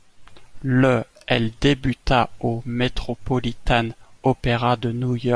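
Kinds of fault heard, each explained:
No technical faults can be heard anywhere in the speech: the signal stays continuous and steady, with no gaps, distortion or level problems.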